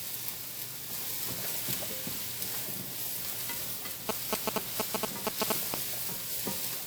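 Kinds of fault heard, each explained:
generation loss: The whole clip has a swirly, smeared, hollow quality with blurred attacks and hardly anything above 20.1 kHz, more damage than a single pass at a bitrate that fits WMA at around 128 kbit/s would cause. The likely cause is repeated decoding and re-encoding, perhaps fifteen or so passes, each quantising again on a shifted frame grid, so noise and spectral gaps build up from pass to pass.
GSM signalling bursts: From 4.09 s to 5.74 s a galloping dit-dit-dit of short buzzes at about 217 Hz cuts across the audio, roughly as loud as the sound itself. A nearby 2G phone is sending brief groups of radio bursts while signalling to the network. The audio circuitry rectifies that RF and turns the burst envelope into audible clicks and buzz, which stop when the phone goes quiet.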